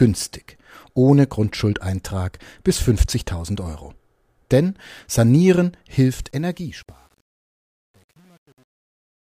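From 5.98 s to the end of the speech clip there is truncation distortion on a fade. The level stage reducing the signal keeps too few bits and adds no dither, and the coarseness of the steps fits roughly a 9-bit word length. As the fade gets quieter, the waveform collapses into a handful of square steps, so the tail sounds gritty. This is at its worst from 6.68 s to 9.23 s.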